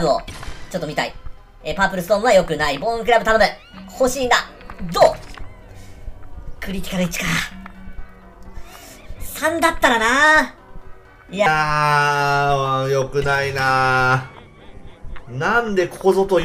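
A section at the wrong speed runs from 0.0 to 11.46 s: the audio plays 1.29 times too fast, about four semitones sharp and hurried, likely from a clock mismatch. A spectrogram shows energy shifted upward and compressed in time, dropping to normal at 11.46 s.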